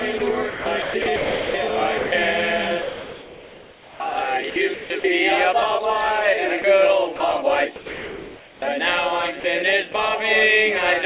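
From 0.18 to 2.12 s and again from 2.82 to 5.04 s, the sound is chopped by the voice detector. The sender likely gated quieter parts as background. About 0.88 s and 1.44 s are swapped for comfort noise. The sound stutters.

Next comes sound dropped by the voice detector. The detector likely stopped sending when the level fell. There are brief gaps at 6.62 s, 7.16 to 7.20 s and 9.40 to 9.44 s. A longer gap runs from 7.76 to 8.62 s. Comfort noise fills each gap, and the sound resumes afterward. Throughout, nothing is heard above 4 kHz, which fits a narrowband telephone codec.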